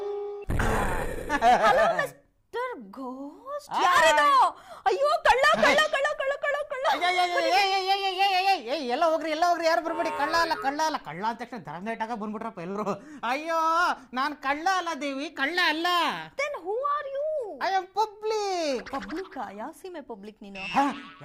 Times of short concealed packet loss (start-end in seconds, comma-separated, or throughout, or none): 12.71-12.77